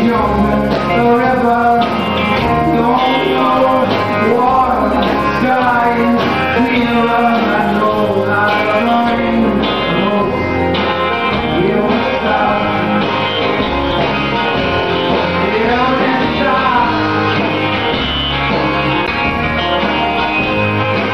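At 0.88 s a brief blip cuts through the audio. This is damaged data in the compressed stream. The decoder misreads the corrupted frames, loses sync, and searches for the next valid frame header.

From 9.10 s to the end, the treble falls away smoothly. De-emphasis has been applied wrongly. A high-frequency cut meant to undo a boost was applied where none existed, or was applied twice. The top end sits about 8 dB down at 10 kHz relative to 1 kHz. The sound turns dull and muffled.

Within that muffled stretch, the stream damage returns at 13.91 s and 19.07 s. Each is another short glitch as decoding breaks and resyncs.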